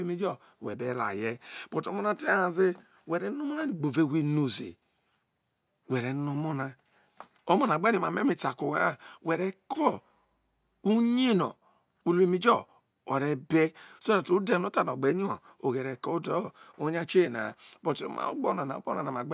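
Nothing in the recording stands out as a technical fault; the speech runs along without any audible glitch or interruption at any point.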